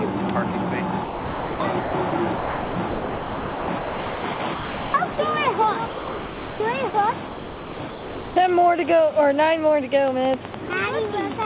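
Sound chopped by the voice detector, from 1.04 to 5.18 s: the audio keeps cutting in and out, with about 2.9 s of that stretch replaced by comfort noise. This is likely the sender's voice activity detection repeatedly mistaking quiet parts of the sound for background and pausing transmission.

Sound dropped by the voice detector, from 5.86 to 6.60 s and again from 6.90 to 6.94 s: the sound gives way to steady noise, 740 ms in the first gap and 40 ms in the second, then returns. The detector likely judged the signal to be background and stopped sending, so the receiver generated comfort noise until transmission resumed.

Sound chopped by the voice detector again, from 7.26 to 8.36 s: about 1.0 s of this section is swapped for comfort noise in fragments, giving the same choppy, on-off texture as before.

Train of clicks, from 10.08 to 11.43 s: around ten sharp pops at roughly 6 per second, unevenly spaced and standing about 15 dB above the sound, ticking through quiet moments as well. 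The cause is likely interference or a faulty connection injecting pulses. Within this stretch, sound chopped by the voice detector returns briefly between 10.52 and 10.70 s, with 60 ms replaced by comfort noise.

Across the whole clip, nothing is heard above 4 kHz, which fits the G.711 A-law call path at 64 kbps.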